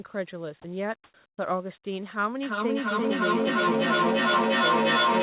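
At 0.62 s a short piece of speech, about 20 ms, disappears and a flat hiss stands in for it before the sound resumes. This is sound dropped by the voice detector. The sender's voice activity detection likely judged that brief, low-level stretch to be background and stopped transmitting, so the receiver inserted synthetic noise until the detector triggered again.

Two pauses follow where comfort noise replaces the background. From 1.04 to 1.14 s the natural room tone, about 49 dB below the loud speech, gives way to a smooth, textureless noise about 10 dB louder than what it covers. From 1.30 to 1.38 s the background, about 63 dB down, is swapped for noise about 22 dB quieter, which is close to a dropout. In both cases the likely cause is discontinuous transmission, where the far end rebuilds the gap from a coarse spectral estimate instead of real audio.

From 2.42 s to the end the speech is caught in a feedback echo between two devices. 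A second device on the same call plays the far audio into the room, and the first microphone captures it again. Its echo canceller cannot remove sound it did not play itself. Repeats arrive roughly every 0.3 s and become thinner and more metallic. At their loudest they sit about 7 dB above the direct speech, so they stack up and do not decay. All of this sits within a narrow band, with nothing above 4 kHz, which fits a G.711 μ-law call codec.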